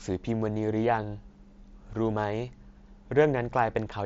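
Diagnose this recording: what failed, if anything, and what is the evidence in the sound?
Nothing failed: the speech comes through a Bluetooth mSBC headset link working as designed, with content stopping near 7.7 kHz as that wideband codec's 16 kHz sampling implies, a light graininess on louder passages consistent with its fixed bit allocation at a rate that fits about 61 kbps, and no dropouts, clicks, level jumps or timing disturbances anywhere in the signal.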